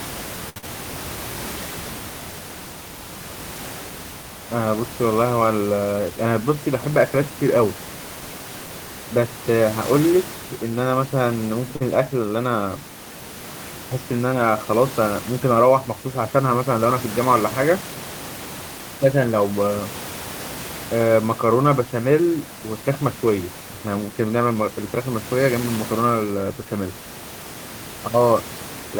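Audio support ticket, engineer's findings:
0.49–0.68 s: sound held and drawn out, slight buzz or dip, then resumes from the same point. Short stall from a late packet. Jitter buffer ran dry, receiver stretched the last sound about 66 ms until the packet landed, nothing dropped; net delay up 66 ms. 11.76–11.82 s: same symptom, shorter hold. Second short stall from a late packet, about 47 ms stretched, nothing lost, delay up 47 ms.

0.58–0.64 s, inside the first stall: brief smear or wobble. Short concealed packet loss. About 60 ms never reached the decoder in time. Receiver bridged the gap by extending the preceding sound, pitch-based where voiced and shaped noise otherwise, then cross-faded back. Delay eased by roughly 15 ms.

5.85–6.27 s: speech hurried, pitch unchanged. Jitter buffer speed-up, running at 112%. Buffer had overfilled past target, likely from a burst of delayed packets arriving together. 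Receiver trimmed repeated pitch-period slices, roughly 50 ms in total, to pull latency back down. Room noise sits about 14 dB below speech throughout and is part of the recording.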